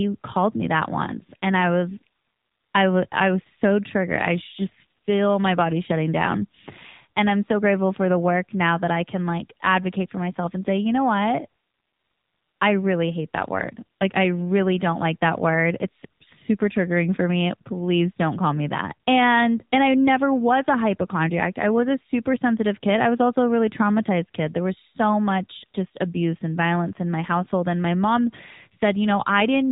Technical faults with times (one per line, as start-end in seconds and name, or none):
0.00-29.72 AMR narrowband mobile codec